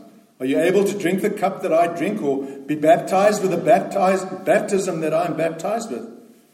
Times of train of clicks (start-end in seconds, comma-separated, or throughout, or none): none